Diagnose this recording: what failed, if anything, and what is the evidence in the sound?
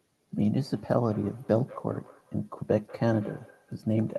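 Feedback echo between two devices, at the call-processing stage. From 0.66 s to the end, the speech returns about every fifth of a second, at least about 22 dB below it. A second device replays the call into this microphone, whose echo canceller ignores sound it didn't play.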